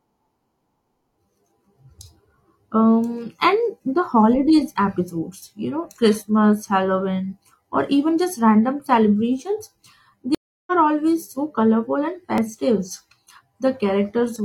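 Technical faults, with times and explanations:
10.35–10.72 s, stream reconnect: the connection drops and there's about a third of a second of dead air, 325 ms. A fresh decoder picks the speech back up a bit further along, roughly a sixth of a second past where it cut, so a small chunk simply goes missing.
12.38–14.36 s, periodic USB or driver dropouts: a few tiny gaps land just under a second apart, every 0.99 s. Each time something stalls the bus or driver, around 10 ms of audio is skipped outright, so you hear regular little ticks in the speech.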